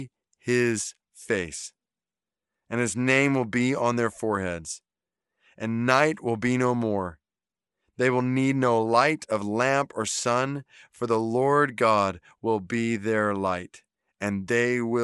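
From start to finish, the speech carries plainly audible codec damage. The upper frequencies sound grainy and hissy rather than clear. Consonants and the top of the voice take on a breathy, noisy edge. This is likely Bluetooth LC3 compression. LC3 is a transform codec that works on short blocks, here consistent with 10 ms frames. When bits run short, it drops parts of the upper spectrum and fills the gaps with noise. The damage fits a rate near 48 kbps.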